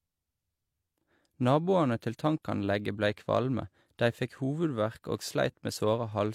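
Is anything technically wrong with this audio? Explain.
No, nothing is technically wrong with this speech recording. No fault can be heard anywhere in it.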